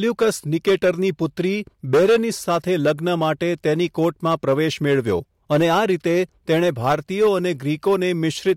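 Hard clipping runs through the whole speech clip. The signal was driven about 9 dB past what one stage in the chain could pass. Every peak above that ceiling was sliced flat. A small share of the samples is affected, only a few percent. The flat tops add harmonics high in the spectrum. They are heard as a harsh, crackly fuzz on the loudest moments, while quieter stretches pass through intact.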